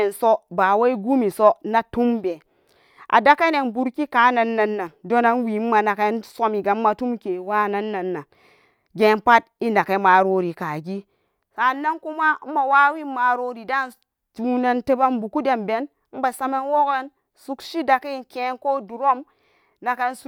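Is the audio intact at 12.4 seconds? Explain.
Yes, at 12.4 seconds the speech plays through cleanly, with no dropout, click, distortion or other audible fault at that moment.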